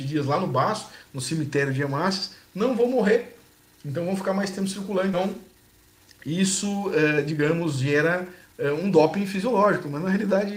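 At 5.13 to 5.15 s, a skip ahead occurs: about a second of audio is dropped while later audio waits. Playback jumps forward almost seamlessly, with no filler.

Jitter buffer speed-up follows from 5.25 to 6.24 s at 108% speed, then from 6.76 to 10.37 s at 111%. Short pitch-period slices are repeatedly cut to shrink the excess buffered delay, so the sound runs hurried at unchanged pitch.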